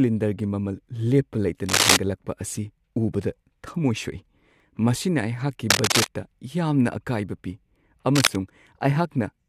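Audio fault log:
1.66–1.97 s, 5.69–6.07 s, 8.15–8.36 s: cable scratch noise. Dense, uneven crackling about as loud as the speech or louder, likely a worn cable or connector being moved, unlike a single clean click.
4.60–4.62 s: overlap between stream segments. Right after "ꯊꯝꯃꯣꯏ ꯁꯣꯛꯏ", about 20 milliseconds of speech drop out at a segment join, so the waveform jumps and a tiny skip is heard rather than a rustle.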